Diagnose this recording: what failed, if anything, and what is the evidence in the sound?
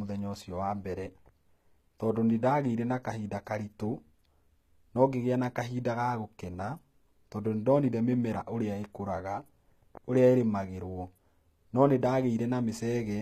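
HE-AAC compression throughout, at the codec stage. The speech carries plainly audible codec damage: s sounds come out gritty and lispy, and nothing sits above about 14.9 kHz. The treble is present but does not sound like the original. The likely cause is spectral band replication at a very low bitrate, around 20 kbps, which fits HE-AAC v2. Only the lower band is truly coded, and the top is rebuilt by copying lower bands upward under a coarse envelope, so the harmonics fail to line up across the crossover.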